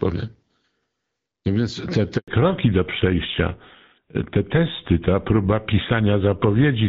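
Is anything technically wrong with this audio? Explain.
Yes, there are two faults.

At 2.18 s, just after "więc te", the speech cuts to silence for about 100 ms, until 2.28 s. This is a handover gap: the phone switched the call between networks, and no speech frames arrived while the new link came up, so that stretch is lost.

From 2.28 s to the end, the speech turns duller and rougher, with nothing above 4 kHz. This is a fallback to narrowband. After the handover, the call dropped from AMR-WB HD Voice to an older narrowband codec, one that fits GSM full rate, which cannot carry the upper band. Before 2.28 s, the wideband codec's coding damage is light.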